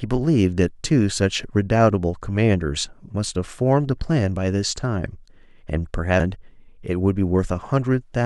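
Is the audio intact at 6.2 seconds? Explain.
No. At 6.20 s there is damaged data in the compressed stream: corrupted bytes make the decoder misread the frame there and lose sync until it locks onto the next valid frame header, which breaks the speech with a momentary glitch.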